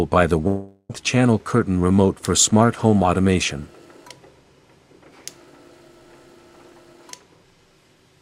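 From 0.47 s to 0.91 s the sound breaks off and is replaced by a smeared continuation of its last moment, a buzzy tone that fades over roughly 0.42 s and then drops to a brief silence of about 20 ms before the audio resumes further on, with that stretch simply gone. This is likely a long network dropout: no audio arrived for about 420 ms, and the receiver filled the gap by extending what it last had until it gave up.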